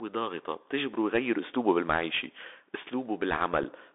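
From start to finish the speech passes through a Bluetooth CVSD headset codec. The band sits between roughly 300 Hz and 3.6 kHz, so everything above is gone and the voice sounds boxed-in and telephone-like. CVSD codes each sample as a single up-or-down bit, consistent with a 64 kbps stream, and its adaptive step cannot track fast high-frequency movement. The damage is plainly audible: sibilants come out scratchy, louder passages roughen, and a granular hiss runs beneath the voice.

At 3.63 s there is one dropout from unconcealed Bluetooth headset packet loss. About 7.5 ms of audio, the size of a single packet, never arrived, and nothing was synthesised to cover it. The result is a brief hole with hard edges. Immediately afterwards the level dips for a moment while the CVSD decoder's step size rebuilds.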